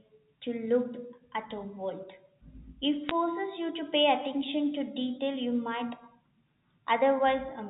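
A speech clip on a telephone-band G.711 line, with a brief burst of bit errors on a digital phone line at 3.09 s: a few flipped bits, roughly 0.15 percent, corrupt individual samples in the speech.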